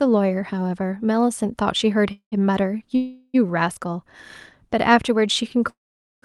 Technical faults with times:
2.11-2.34 call audio freeze
2.96-3.36 call audio freeze
5.70-6.24 call audio freeze

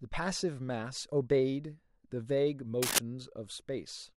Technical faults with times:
2.82-2.99 cable scratch noise

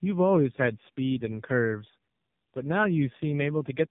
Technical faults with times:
0.00-3.91 tandem speech coding

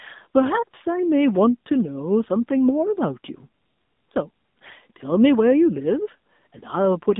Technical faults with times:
0.00-7.20 AMR narrowband mobile codec

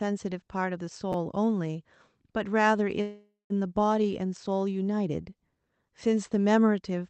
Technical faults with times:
1.12 chunks out of order
3.01-3.52 call audio freeze

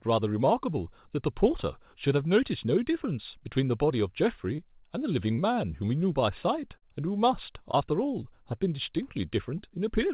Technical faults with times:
4.56-4.60 short concealed packet loss
5.34-5.40 short concealed packet loss
6.78-6.84 short concealed packet loss
7.72-7.75 short concealed packet loss

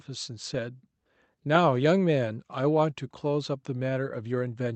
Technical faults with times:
none

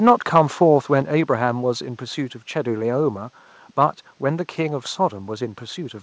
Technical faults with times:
0.07-0.41 microphone overload
1.02 microphone volume stepped down

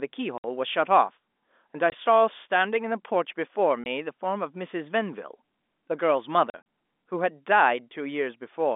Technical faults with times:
0.38-0.44 packet loss filled with silence
1.90-1.92 packet loss filled with silence
3.84-3.86 packet loss filled with silence
6.50-6.64 packet loss filled with silence

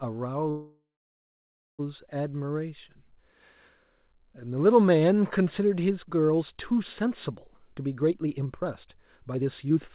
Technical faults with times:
0.50-1.81 call audio freeze
7.57-9.94 jitter buffer speed-up

